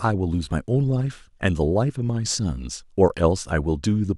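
No technical faults occur at any point in the speech, so there is nothing to describe in time order.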